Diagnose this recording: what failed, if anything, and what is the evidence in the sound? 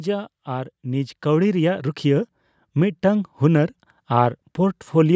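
In the call processing, automatic gain rising: from 0.44 s to 3.41 s the speech and its background noise swell together by about 8 dB as the gain control, judging the input too quiet, ramps up. The waveform envelope widens steadily, and the spectrogram's noise floor brightens below the 8 kHz ceiling.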